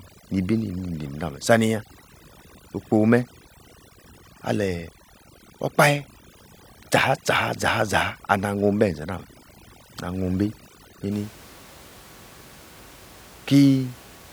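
A speech clip with overdone noise removal running from the start to about 11.11 s. The noise reduction is set far too aggressive, so any frequency band sitting close to its noise estimate gets pulled right down or switched off, taking the softer parts of the speech with it. You get near-dead gaps with little twinkling specks between phrases. After that point the room noise is audible again, sitting about 24 dB under the speech.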